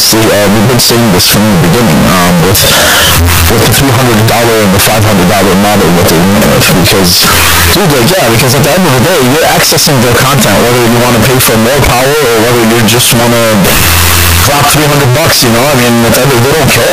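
From start to end, the speech is buried in loud, harsh distortion, and pauses are as loud as speaking. The likely cause is signed and unsigned mixed up in 16-bit samples, flipping the top bit so every zero crossing jumps across the full range.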